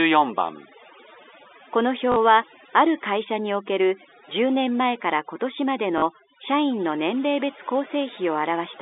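Overdone noise removal runs through the whole recording. The noise reducer was set too hard. Frequency bands close to its noise estimate are pushed far down or shut off, and the quieter parts of the voice get cut with them. Between phrases the background drops to near silence, dotted with twinkling specks. The narrow telephone band of the G.711 line can be heard underneath all of this.

At 2.12 to 2.16 s there is packet loss with the last packet repeated. About 40 ms goes missing, which fits two 20 ms packets. The receiver replays the last good packet to fill the gap. The short run buzzes near 50 Hz. It is heard as a brief robotic stutter.

The same fault returns at 5.98 to 6.02 s. Again about 40 ms is filled with a repeated packet, giving another buzzy stutter.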